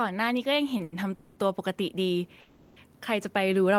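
Automatic gain rising from 0.44 s to the end: the gain control judged the input too quiet and raised its level gradually, so the speech and background swell together.

Short stalls from a late packet at 0.77 to 0.81 s and 0.83 to 0.94 s: the jitter buffer ran empty, so the last sound is held for about 20 ms and then 90 ms with a slight buzz or dip before continuing, with nothing lost.

Call audio freezes at 1.14 to 1.38 s and 2.40 to 2.78 s: the speech stops and the last sound is drawn out as a fading buzz or hiss for 220 ms and then 360 ms, never quite reaching silence, before resuming where it left off. The likely cause is packets held up in transit draining the jitter buffer.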